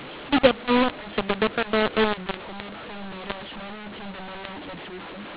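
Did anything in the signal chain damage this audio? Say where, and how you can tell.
Yes, at the codec decode stage. The speech is harsh and distorted throughout, and the pauses fill with noise. This is mu-law and A-law mixed up: A-law telephone samples decoded as mu-law, which scrambles the levels.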